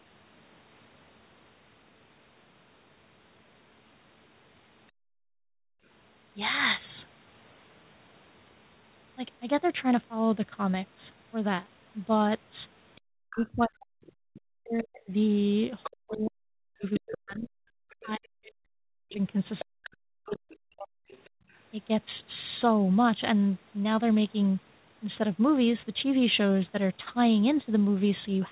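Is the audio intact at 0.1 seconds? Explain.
Yes, the audio is intact at 0.1 seconds, with the speech simply carrying the narrow telephone band of the call path, which leaves nothing above 4 kHz.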